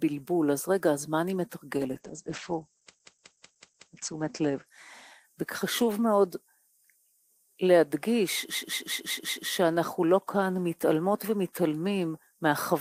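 A call bitrate drop runs from 1.77 s to 6.22 s. The sound turns rough and muffled as the encoder falls from 32 kbps to 10 kbps. At that low rate the audio bandwidth shrinks from 20 kHz to 8 kHz, so the top end disappears. It sits at its lowest for about 1.5 s before recovering. The cause is a fall in the call's bandwidth estimate, which forced much coarser coding. Two system hang loops also occur, from 2.97 s to 3.90 s and from 8.55 s to 9.47 s. In each, a 185.76 ms slice repeats exactly five times, giving a machine-gun stutter at about 5.4 per second. That loop length fits an 8192-sample buffer. The machine or its driver stalled while the audio hardware kept replaying the same ring buffer. Little or no audio appears to be lost around each loop.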